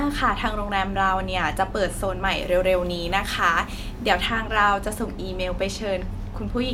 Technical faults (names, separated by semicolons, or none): pre-emphasis left on